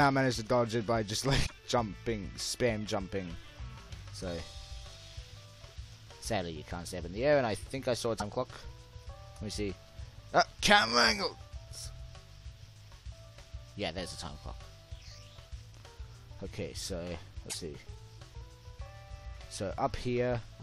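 At 1.45 to 1.52 s, 8.19 to 8.22 s and 17.49 to 17.55 s, the sound skips forward and a brief chirp or noise burst replaces it. Each event lasts about one to three 26.1 ms frames. The likely cause is a broken MP3 bit reservoir: after dropped frames, the decoder reads borrowed bits from the wrong frame. On a spectrogram, each appears as a short broadband smear or gap. The waveform shows a discontinuity.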